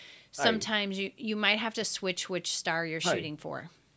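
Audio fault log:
No faults heard anywhere in this speech recording.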